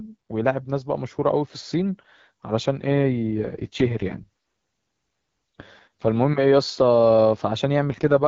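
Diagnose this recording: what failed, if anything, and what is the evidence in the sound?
The speech turns rough and synthetic from 2.8 to 6.08 s and from 7.84 s to the end. This is an AMR rate drop at the network and codec stage: a weak link pushed AMR-WB down from 12.65 kbit/s, and the rasp points to about 6.6 kbit/s. Unlike a narrowband fallback, the band stays full and nothing drops out.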